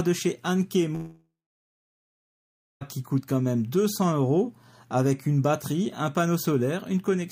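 At 0.95 s the sound gives way to a fading buzz that carries the last moment on briefly before thinning out, and for roughly the final 1.5 s of the gap there is only silence. The audio resumes at 2.83 s, but about 1.86 s of material is simply gone rather than delayed. This is likely a long network dropout: packets stopped arriving, the receiver concealed the hole by extending what it had, then gave up.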